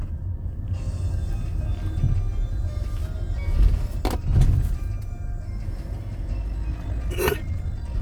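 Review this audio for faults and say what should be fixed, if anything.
A time-stretched section runs from 6.4 s to the end. The pace jumps abruptly to about 1.83 times the normal speed. The pitch stays where it was. The result sounds rushed. The likely cause is software compressing this stretch to fit a shorter length. It keeps pitch by discarding short slices of the waveform. Prevent it by trimming or editing content rather than squeezing it to fit.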